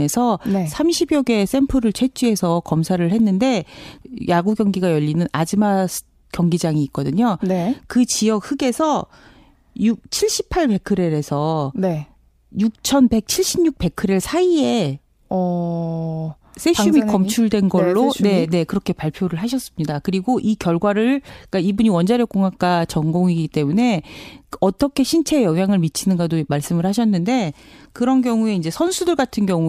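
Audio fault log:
No faults detected in this speech recording.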